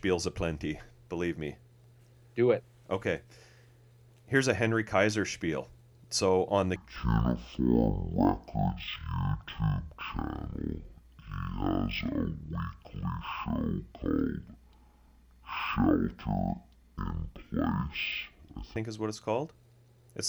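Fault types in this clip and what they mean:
Stereo read as mono: the left and right samples are taken one after another as a single channel, so from 6.76 s to 18.76 s, after "on the" and before "is what it's called", the speech runs at half speed and an octave low.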